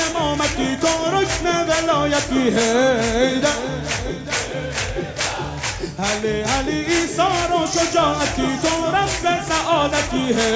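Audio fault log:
Nothing stood out on listening to this audio.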